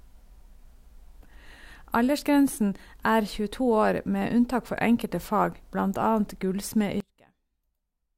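From 7.00 s to the end of the speech at 8.17 s, the centred sound collapses by about 27 dB, leaving only a faint residue. This points to one channel inverted, with the likely cause being one stereo side flipped in polarity so the shared centre cancels when the channels sum to mono. Unlike a dropout or a gain fade, the sound doesn't cut to silence: nearly all of it vanishes, background included, and only a faint copy of the mismatch between the channels remains.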